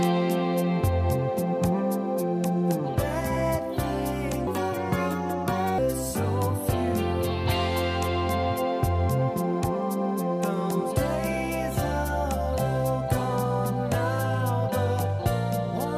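From 4.47 s to 5.78 s, a section plays at the wrong speed. It runs at 1.44 times its proper rate, so it rushes forward and jumps up in pitch by about seven semitones. Tempo and pitch rise together, and the sound turns thin and hurried. At 5.78 s it drops back to normal speed just as abruptly. The likely cause is an editor or player handling this stretch against a mismatched clock.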